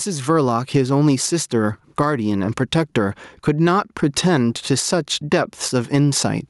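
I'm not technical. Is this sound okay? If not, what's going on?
No. All the way through this speech, the level breathes: in the pauses the sound swells up, then sinks each time the talking gets loud, and the voice sounds flattened, with little difference between loud and soft moments. This is gain pumping, and the likely cause is the microphone being turned up far too high, with an automatic level control yanking it down hard on every loud sound and letting it rise again in the gaps.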